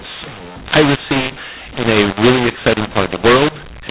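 From start to finish the speech sounds harsh and gritty, with loud passages distorted and soft ones oddly out of proportion, and the pauses fill with a hiss that should be silence. This is mu-law and A-law mixed up: telephone audio written with G.711 mu-law coding was decoded as A-law, so every 8-bit code maps to the wrong level, scrambling loudness and lifting the quietest samples well above zero. The narrow telephone band itself comes through as expected.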